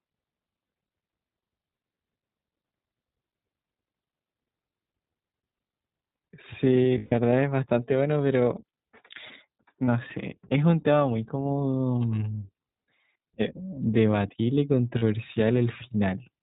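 Throughout, the sound is narrowband iLBC coding: nothing above 4 kHz survives, and the speech has a plainly audible rough, slightly synthetic texture, consistent with iLBC's 15.2 kbps mode, where each 20 ms frame's excitation is coded independently.

Lost iLBC frames interrupt it at 0.66–0.70 s, 6.98–7.13 s, 9.86–9.89 s and 14.98–15.03 s, lasting 40, 140, 20 and 40 ms. The decoder repeats the last pitch cycle with added noise, heard as a held, buzzy vowel fading across the 140 ms gap, with clean recovery immediately after each.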